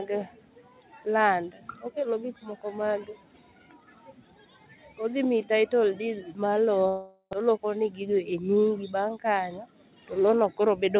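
A speech recording that cuts out from 6.88 to 7.35 s in what sounds like a long network dropout. For about 450 ms the last sound is stretched into a fading buzz, then there's roughly 70 ms of near silence before the speech picks up again with about 400 ms of it simply gone. That's likely packets that never arrived, with the receiver concealing the hole, and the timing settles back a little differently afterwards. The band stops at 4 kHz, consistent with a G.711-style call codec.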